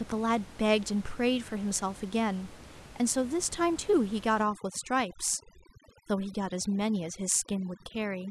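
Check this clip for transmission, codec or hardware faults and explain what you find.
One fault is present in this speech. Overdone noise removal runs from 4.44 s to the end at 8.31 s. Noise reduction set far too strong cuts every frequency band near its noise estimate down or off, quiet voice detail included. The room noise, about 20 dB below the speech before then, drops and breaks up into twinkling specks.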